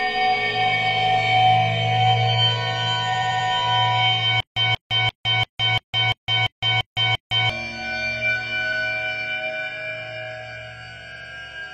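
At 3.09 to 3.44 s there are repeated frames: an 85 ms chunk plays four extra times, a choppy stutter that stretches the sound by about 0.34 s. From 4.40 to 7.50 s there's a stutter with silent gaps: a 183 ms burst comes back nine times every 343 ms with 161 ms of dead silence between, likely a stalled stream retrying, so the real audio there is lost. The same repeated-frames stutter returns at 8.68 s (one extra play) and at 11.12 to 11.29 s (two extra plays).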